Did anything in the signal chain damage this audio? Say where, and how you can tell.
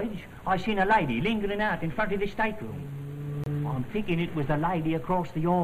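Yes, there's one hit, and it's at the codec stage. From about 3.44 to 3.48 s there's a short chirpy blip, roughly 40 ms long and peaking somewhere around -20 dBFS, that sits on top of the sound instead of belonging to it. That's a corrupt frame decoded. Some bits in a single compressed frame got flipped, the decoder played it anyway, and the misread gains and codes dumped energy at the wrong frequencies for about one frame's worth of time.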